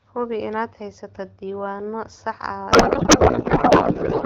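From 2.71 s to the end, a codec payload misread occurs: the receiver unpacks the AMR-WB frames with their bit fields shifted, which points to octet-aligned packing read as bandwidth-efficient. The clear speech, consistent with 12.65 kbit/s, collapses into garbled noise and warble.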